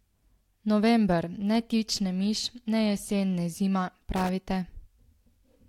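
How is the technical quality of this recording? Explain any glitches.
The recording has one glitch, a loose connector crackle near the end. It runs from about 4.16 to 4.29 s, roughly 0.13 s in all. A worn or dirty contact somewhere in the cable path is making and breaking as it shifts. Each break chops the speech signal off and back on. Any DC sitting on the line turns those breaks into pops. The result is a brief, irregular burst of scratchy crackle over the speech.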